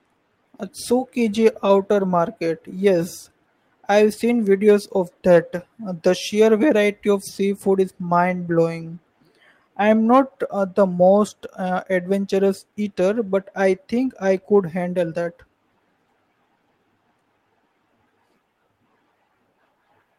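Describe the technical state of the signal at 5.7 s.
Nothing is wrong with the signal at 5.7 s; the audio is intact at that point.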